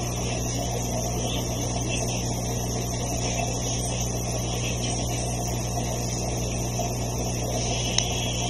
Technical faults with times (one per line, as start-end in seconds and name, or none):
0.00-8.49 channel delay (comb filtering)